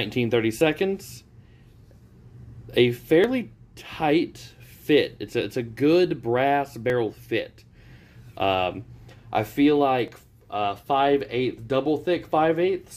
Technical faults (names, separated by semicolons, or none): dropped buffer (overrun)